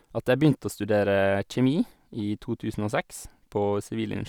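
No faults detected anywhere in the speech recording.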